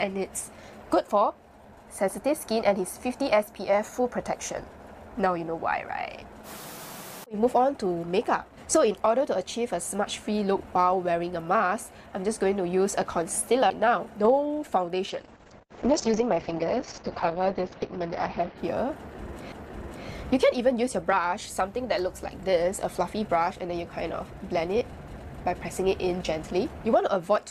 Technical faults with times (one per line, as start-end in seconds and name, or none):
13.70 CD skip
15.10-18.64 call bitrate drop
19.52 CD skip